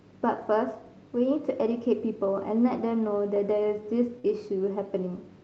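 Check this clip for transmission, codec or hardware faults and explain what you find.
Three packet-loss events occur in this speech, carried over an Opus call path whose content stops near 8 kHz.

Lost packet rebuilt from error correction, 0.37 to 0.43 s and 4.24 to 4.30 s: each time two lost packets were replaced by low-bitrate copies from the next packet, about 40 ms in total each time. These sound briefly rough and noisy with no gap. A spectrogram shows grainier, blurred harmonics there.

Short concealed packet loss, 4.19 to 4.26 s: about 40 ms never arrived, and the decoder extended the preceding sound for about 43 ms before blending back. It gives a brief smeared wobble.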